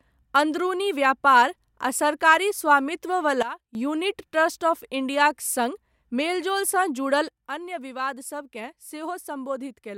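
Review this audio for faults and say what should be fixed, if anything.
The level drops abruptly by about 15 dB from 3.43 to 3.75 s, then by about 9 dB from 7.28 s to the end, with the background falling too: a sudden gain jump, likely a gain setting applied without a ramp. Smooth every gain change over several milliseconds.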